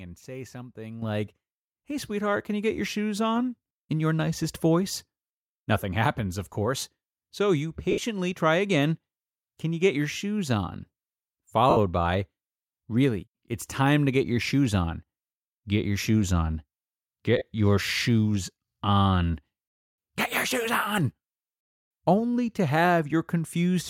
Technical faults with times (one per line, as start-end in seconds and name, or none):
1.02 microphone volume stepped up
7.91-7.98 lost LE Audio frames
11.70-11.77 lost LE Audio frames
17.37-17.42 lost LE Audio frames